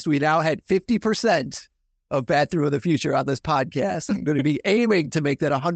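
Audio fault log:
Nothing stood out on listening to this speech as it came over the call path.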